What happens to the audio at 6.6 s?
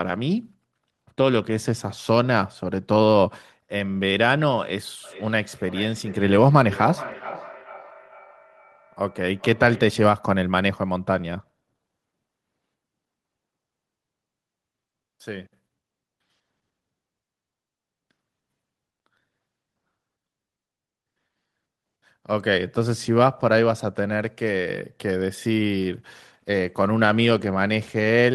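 At 6.6 s you're in a feedback echo between two devices (5.04 to 10.07 s): a second device replays the speech, and it loops back about every 0.4 s, peaking about 16 dB down.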